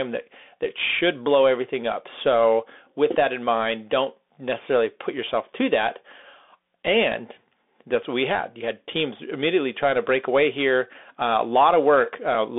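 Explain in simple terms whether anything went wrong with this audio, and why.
The whole recording, from start to finish, passed through a Bluetooth CVSD headset codec, the basic connection many wireless headsets use for calls. It keeps only a narrow slice of the sound, roughly 250 Hz to 3.5 kHz, with nothing above about 3.7 kHz, so the speech sounds thin and boxy. What separates it from an ordinary phone line is the clearly audible grainy hiss under the speech and the scratchy, roughened s sounds.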